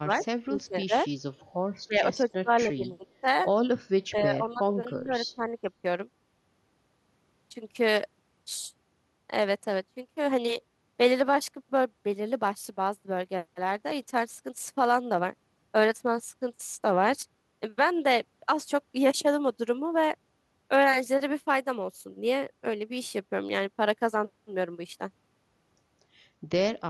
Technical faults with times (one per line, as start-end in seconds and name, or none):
0.01-0.25 speech suppressed in double talk
0.21-0.25 echo leak
0.51-0.93 speech suppressed in double talk
1.87-3.24 speech suppressed in double talk
4.10-5.67 speech suppressed in double talk